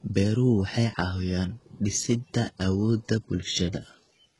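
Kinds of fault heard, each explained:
HE-AAC compression: speech treble likely rebuilt from copied lower bands at roughly 12 kbps, so the heavily damaged top sounds gritty and metallic, ending at 11.5 kHz.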